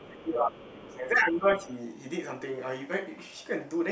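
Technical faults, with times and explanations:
0.00–0.04 s and 0.59–0.65 s, other side's voice leaking through: two brief, faint scraps of a second voice sit about 30 dB under the main talker. That's likely loudspeaker playback the echo canceller didn't fully scrub out of the mic, so short leftover fragments get through.
0.02–1.69 s, speech suppressed in double talk: the talker's level dips by up to roughly 15 dB across about a second and a half, while the far side is active. This is likely the echo canceller failing to separate the two voices and ducking everything.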